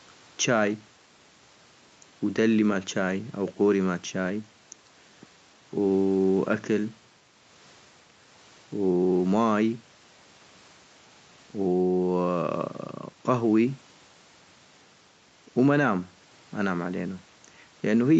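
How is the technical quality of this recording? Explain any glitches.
The technical quality of this speech recording is sound, with no glitches to explain.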